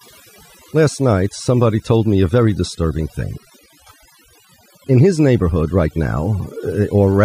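From start to finish there's overdone noise removal: the denoiser was pushed too hard, so bands near its noise estimate get gated out along with quiet speech detail. Between phrases the background drops to near silence with little twinkling specks.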